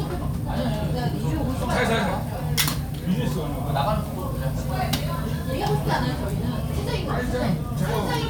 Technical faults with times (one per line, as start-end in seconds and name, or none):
none